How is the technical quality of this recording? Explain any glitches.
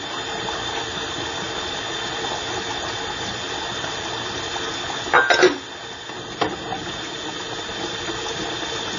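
The quality is limited by one fault throughout the recording. The sound is dull and thin, with nothing above about 7.1 kHz and a swirly, smeared texture. The likely cause is low-bitrate audio saved at a high bitrate: the MP3 was first encoded at a very low bitrate, then re-saved at a generous one, which cannot restore the removed detail.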